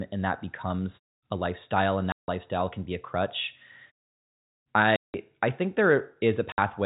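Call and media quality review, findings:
Packet loss filled with silence: hard-edged gaps at 2.12–2.28 s (after "a lifestyle and"), 4.96–5.14 s (before "I think"), 6.52–6.58 s; 160, 180, 60 ms, consistent with 20 ms packets. Jitter buffer inserts silence. G.711 telephone band intact.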